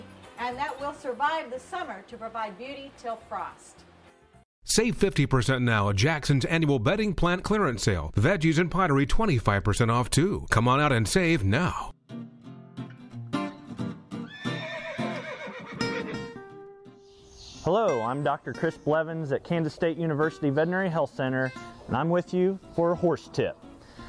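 No technical faults can be heard anywhere in the audio. Nothing in the sound points to a problem in the recording or playback chain.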